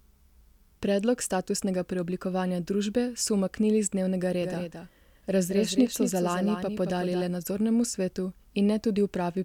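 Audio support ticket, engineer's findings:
Doubled audio track, 4.42 s to 7.22 s. Starts right after "umaknili z dnevnega", ends before "le nadzornemu svetu". Speech heard twice. Second copy trails by around a fifth of a second, roughly 5 dB down. Full-band, dry, no room tail. Abrupt onset and cutoff. Likely cause: capture routed a second time through a slower path, or an edit leaving two offset copies. Check monitoring loopback and the edit timeline at this span.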